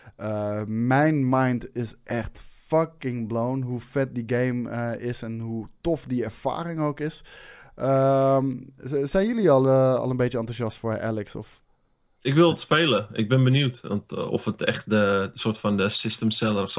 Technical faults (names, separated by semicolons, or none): none